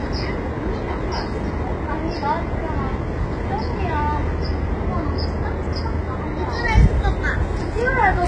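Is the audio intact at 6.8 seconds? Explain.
No. At 6.8 s, as through the whole clip, the treble sounds gritty and metallic, likely from HE-AAC compression at a very low bitrate near 12 kbps. The upper band is rebuilt from copied lower bands, so a spectrogram shows repeated, smeared upper patterns stopping at 11 kHz.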